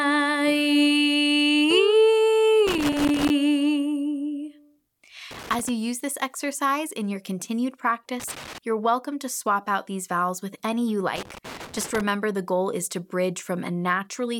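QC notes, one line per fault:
2.67–3.30 s, 5.31–5.69 s, 8.20–8.58 s, 11.16–12.01 s: loose connector crackle. A worn contact keeps making and breaking, chopping the signal into irregular scratchy bursts. The waveform shows ragged dropouts and spikes, and the spectrogram shows scattered broadband vertical streaks.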